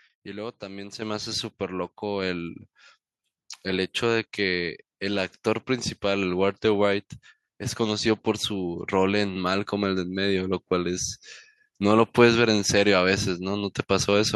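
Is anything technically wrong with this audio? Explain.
Yes. At 1.02 s the microphone volume stepped up: the input gain was raised in a single jump of about 8 dB, so voice and background get louder together. On a waveform the envelope widens abruptly there; a spectrogram shows every band brightening at once.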